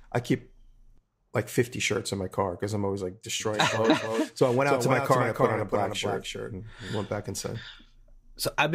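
From about 3.4 s, just after "because I'm always like", until 6.94 s, before "went back inside", the speech carries a doubled audio track, likely from a second, slower capture path or an edit holding two copies out of step. A full-band copy trails the original by roughly a third of a second at a few decibels lower, with no decay or room colour. It sounds like a hard, dry echo that appears and vanishes abruptly.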